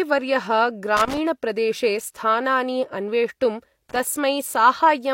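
At 0.97 to 1.18 s, and again at 3.89 to 4.00 s, the speech is broken by loose connector crackle: a worn or dirty contact intermittently opening and closing, chopping the signal, heard as short, irregular scratchy bursts.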